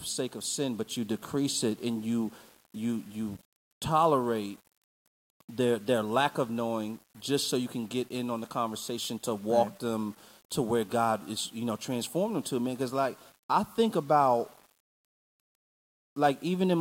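From start to end, the speech has grainy distortion that follows the sound. Quiet passages turn gritty, and the softest parts sputter or drop out. The likely cause is 8-bit rounding without dither. The error sits roughly 30 dB below the signal.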